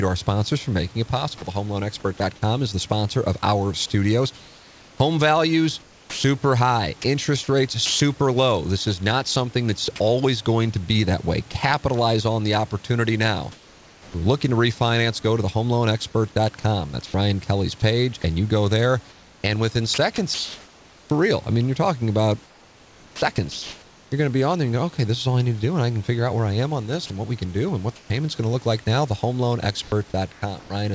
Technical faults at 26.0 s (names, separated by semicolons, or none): none